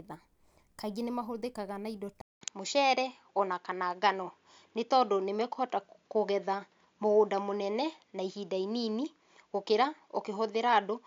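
A speech clip in which, right after "nĩ mahũthĩkaga na indo" at 2.21 s, the sound drops out for 200 ms and returns duller, with nothing above 7.1 kHz, a level shift of a few decibels, and a new, faint background noise well below the speech. The change persists to the end of the clip. The likely cause is the input switched to a poorer device mid-recording, such as a different microphone or a headset's narrower-band profile.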